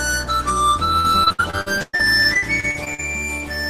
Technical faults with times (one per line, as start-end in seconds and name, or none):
0.99-3.00 repeated packet loss (robotic sound)